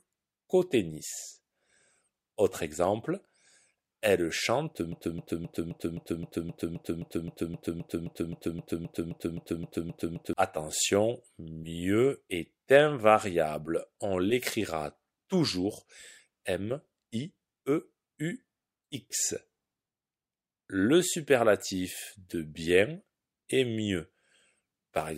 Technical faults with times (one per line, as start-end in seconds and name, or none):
4.92-10.33 broken-record loop